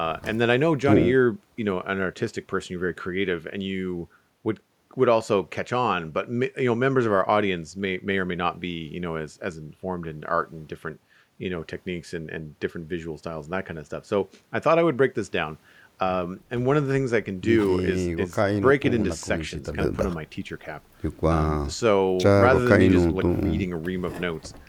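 Nothing here stands out as a technical fault; the recording runs along without a single moment that calls for a closer listen.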